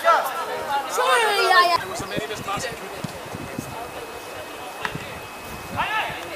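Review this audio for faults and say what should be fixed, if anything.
Nothing stood out on listening, so there is nothing here that needs fixing.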